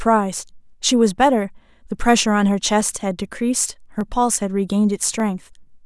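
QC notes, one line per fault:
0.42–5.2 s, clock drift buffer slips: a regular click lands in the speech every 1.2 s, about five times across this span, evenly spaced whatever the speech is doing. The likely cause is two devices running on separate clocks that disagree by a few hundred parts per million, so the buffer between them creeps until a tiny block of samples, only a handful, is dropped or repeated, leaving a brief discontinuity heard as a tick.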